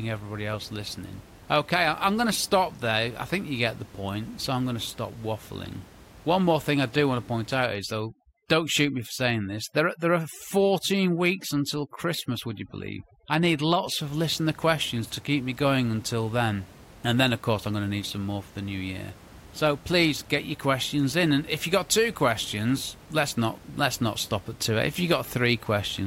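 From 7.66 s, right after "do want to point", until 14.01 s, before "of listener questions to", overdone noise removal sets in. Bands near the noise estimate are cut away along with quiet speech detail, so the background drops and breaks up into twinkling specks. On a spectrogram this shows as isolated blobs scattered across a blank floor.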